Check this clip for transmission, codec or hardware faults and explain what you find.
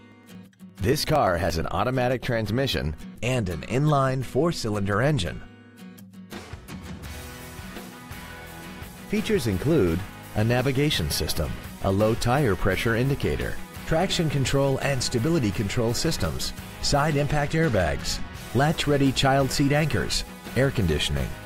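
Periodic USB or driver dropouts occur from 0.12 to 1.73 s. Something stalls the audio driver or USB link every 115 ms, and about 10 ms of audio is skipped each time. The result is around fifteen evenly spaced ticks over that stretch.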